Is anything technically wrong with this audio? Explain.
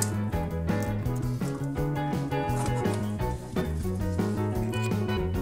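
Yes. There are two instances of compressed frames skipped, at 3.60 s and 5.16 s. Whole frames of the encoded stream never reach the output, either because they are missing or because the decoder rejected them, so playback jumps forward. The first jump is about a tenth of a second, which fits about four 23.2 ms frames. The second is about 0.7 s, which fits roughly thirty frames. On a waveform, the envelope shifts abruptly at each point. On a spectrogram, the patterns before and after the join don't line up.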